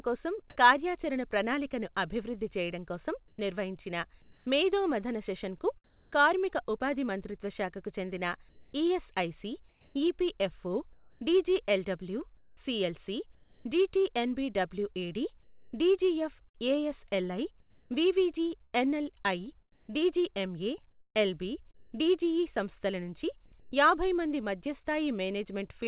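Speech heard through a narrowband call path, with nothing above 4 kHz as G.711 would give. Comfort noise replaces the background at 3.28–4.46 s, 5.84–6.12 s after "మేధో మథన సెషన్కు", 8.49–13.65 s after "ఉపాధి మంత్రిత్వ శాఖకు చెందిన", and 23.60–23.72 s between "డిజిఇ సంస్థల నుంచి" and "యాభై మంది". These are likely discontinuous transmission gaps filled with synthetic noise, shifting the level by about 4 dB at 5.84 s and about 6 dB at 23.60 s and showing on a spectrogram as smooth, featureless bands. From 15.43 to 22.04 s the sound is likely chopped by the voice detector. Quiet edges drop out into fill, so the waveform shows abrupt gated steps.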